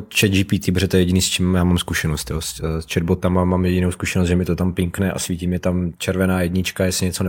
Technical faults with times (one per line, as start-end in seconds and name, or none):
none